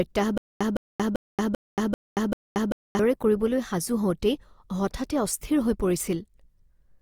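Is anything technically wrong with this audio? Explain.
Yes. From 0.38 to 2.99 s there is a stutter with silent gaps, likely caused by the player or stream stalling and, at each retry, replaying the last fragment it held before running dry. A 161 ms scrap of speech repeats six times, each followed by about 229 ms of dead digital silence, so it returns every 391 ms as an even, mechanical hiccup. The speech that belonged in that span is gone, and normal playback resumes just before "কৰিবলৈ সাজু".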